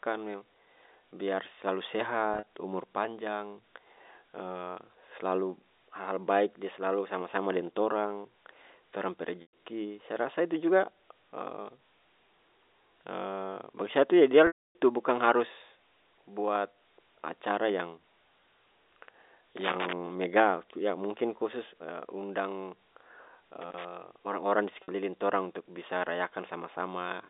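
Packets were dropped on the way to the receiver of this telephone-band speech recording, and the receiver covered each gap by repeating the last pitch period and fading it out, so the fault is packet loss with pitch repetition. The losses fall at 2.34–2.45 s, just after "biar selalu", where about 90 ms went missing in scattered bursts over 120 ms with no run longer than 40 ms; at 9.42–9.52 s, between "deng torang torang pe" and "saya rasa itu juga", with 110 ms lost; at 14.47–14.75 s, with 280 ms lost; and at 24.83–24.88 s, with 50 ms lost. The shorter gaps sound like a briefly held, buzzy sustain. The 280 ms gap outlasts the concealment, so the repeated period dies away into silence before the speech cross-fades back in. The amounts lost fit 10 ms packets. Separately, a loose connector was making and breaking contact at 19.57–19.93 s and again at 23.62–23.85 s. Each time the signal is rapidly chopped, giving an irregular burst of crackle and scratching over the audio. 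The G.711 A-law line coding, audible in the 300 Hz to 3.7 kHz band limit, is not itself at fault.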